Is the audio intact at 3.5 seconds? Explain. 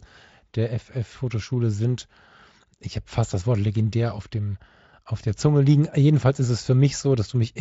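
Yes, the speech at 3.5 seconds is intact, with no fault at that moment.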